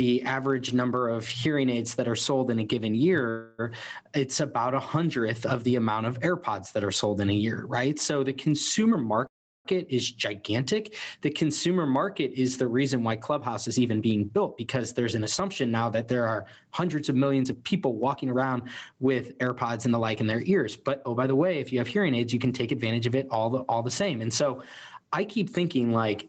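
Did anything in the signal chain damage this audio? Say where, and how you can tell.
Yes. Gain pumping runs through the whole clip at the microphone and processing stage. The gain ducks by around 15 dB under each loud sound, squashing the dynamics. The likely cause is gain set far too high, with a fast limiter clamping it.

Call audio freezes occur at 3.29 to 3.61 s and at 9.27 to 9.67 s, in the network and jitter-buffer stage. The sound stalls into a fading buzz or hiss, and the second stall decays into about 0.36 s of silence. Afterwards the audio resumes where it stopped, so the likely cause is delayed packets draining the buffer.

Jitter buffer speed-ups occur at 8.91 to 9.26 s, just before "is gigantic" (116% speed), from 13.32 to 16.35 s, after "is the reason why" (109%), and from 17.43 to 20.67 s, after "hundreds of" (110%). The receiver trims pitch-period slices to shed backlog, so the audio sounds hurried at unchanged pitch.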